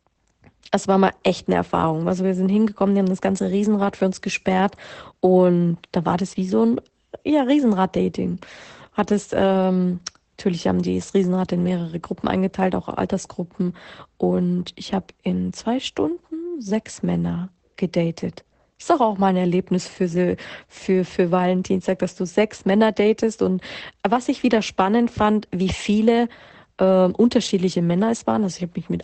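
From the start the whole clip carries Opus voice compression. The codec is running its SILK speech coder in wideband mode, so nothing survives above about 8.5 kHz, and the excitation is coded coarsely enough that the damage is plain: speech comes out a bit muffled and hoarse, with a faintly robotic edge. The degree of smearing fits a low rate around 12 kbps, probably with 20 ms frames.

Later there's hard clipping. From 24.54 to 24.80 s the peaks run right up to the ceiling of whatever stage they pass through and get cut flat. The overload is only about 0 dB, so this is barely past the limit rather than badly overdriven. You hear a brief crackly roughness on the loudest moments, not a sustained fuzz. At 27.37 s one more peak gets squared off, giving a single short crackle.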